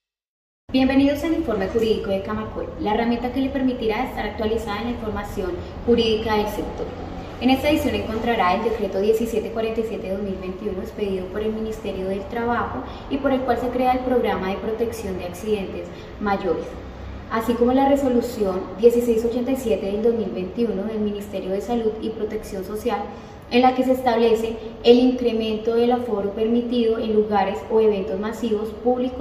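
No technical faults can be heard anywhere in this recording.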